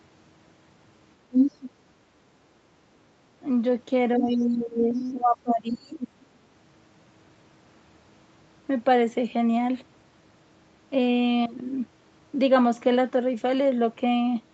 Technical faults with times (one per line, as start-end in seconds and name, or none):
1.31-1.70 other side's voice leaking through
4.16-6.01 speech suppressed in double talk
4.17-4.43 other side's voice leaking through
4.93-5.13 other side's voice leaking through
6.01-6.23 other side's voice leaking through